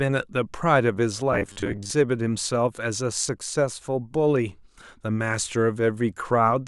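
From 1.33 to 1.92 s, the audio feed likely fell behind, so the playback software kept filling the gap by looping a short stretch of the most recent audio while fresh material was dropped. Roughly half of that passage is repeated rather than new. The loop rate imposes a fixed 100 Hz pitch, which fits a buffer about 10 ms long. The result is robotic sound from repeated short buffers: the speech hardens into a flat, metallic buzz that only loosely tracks the original.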